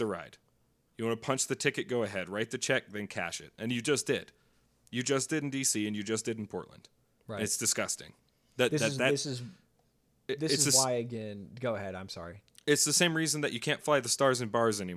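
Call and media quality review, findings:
Findings: none, the speech recording shows no call or media quality issues.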